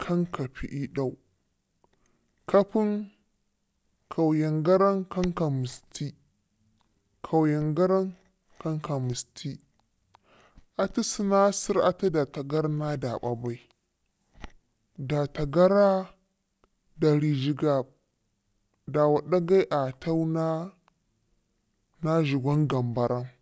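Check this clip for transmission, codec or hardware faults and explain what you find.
One fault is present: a wrong sample rate, affecting the speech for its entire length. The audio plays back slower and lower than it should, running at about 0.73 times normal speed with the pitch dropped by about 5.5 semitones. Samples captured at one rate are being clocked out at a lower rate without any conversion, so timing and pitch shift together by the same ratio. A ratio like this fits material recorded near 22 kHz being played at 16 kHz. The voice sounds deep, slow and dragging throughout.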